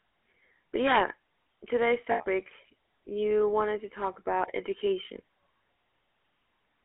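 GSM full-rate coding runs through the whole recording. The speech is rebuilt from a vocal-tract model excited by sparse, regular pulses, giving a steady buzzy, gravelly roughness. The band is held to roughly 300 Hz to 3.4 kHz, and the damage is plainly audible, consistent with a 13 kbps full-rate stream.

Integer overflow strikes from 0.87 to 0.97 s. A loud passage pushes the signal about 2 dB past the largest representable value, and instead of being limited the peaks wrap to the opposite extreme. The result is a violent, sharp crack, harsher than clipping would sound.

Lost GSM frames occur from 2.12 to 2.25 s and again from 4.14 to 4.17 s. The decoder repeats the last good frame's parameters, producing a rough metallic ring. The first gap lasts 80 ms, which points to four 20 ms frames. The second lasts 20 ms, about one frame.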